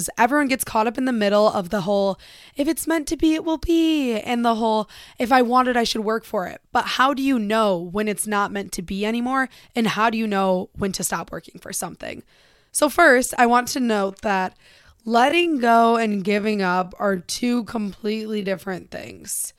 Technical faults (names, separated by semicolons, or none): time-stretched section